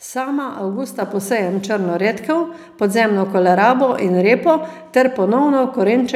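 At 1.02 s the call software judged the microphone too quiet and raised the device's input volume in a single step, a microphone volume stepped up. The speech and the room sound behind it jump together by about 5 dB, with no gradual ramp.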